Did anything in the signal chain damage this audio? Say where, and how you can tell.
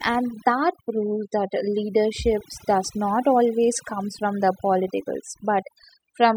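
Yes. Overdone noise removal at the call-processing stage runs throughout: the background collapses to near silence with twinkling specks. A spectrogram shows isolated flickering bins in the gaps and ragged, eaten-away quiet parts where bands fell near the noise estimate.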